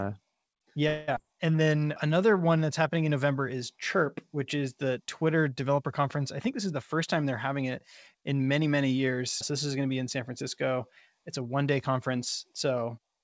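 A call audio freeze runs from 0.88 to 1.10 s. The speech halts and the last sound is stretched into a fading buzz for about 0.2 s, with no silence. Packets were likely held up in transit so the jitter buffer ran dry, and the receiver invented sound to cover the wait. When delivery resumes the speech continues from exactly where it stopped, so nothing is lost and about 0.2 s of extra delay has been added.

A skip ahead follows at 1.16 to 1.18 s. The speech jumps forward with only a tiny seam, and roughly 150 ms of audio is gone. That stretch was dropped, either in transit or by the buffer, while later audio was already queued. The two sides are spliced almost directly, so the jump sounds like a clipped fragment rather than a pause.

A jitter buffer slow-down covers 1.23 to 2.38 s, ending just before "one that's happening in". The speech plays at about 87% speed while keeping its pitch, and syllables sound drawn out. 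The receiver was rebuilding its reserve by repeating single pitch periods and bits of pauses over and over. This added 156 ms across the stretch.

A jitter buffer speed-up runs from 6.39 to 8.64 s, between "developer conference I" and "many years". The speech is pushed to about 109% speed at unchanged pitch and sounds hurried. The buffer held more audio than its target, so the receiver trimmed short pieces of one or a few pitch periods many times in a row. Roughly 200 ms of delay was removed this way. Throughout the clip, the call codec leaves nothing above 8 kHz, which fits G.722 at 64 kbps.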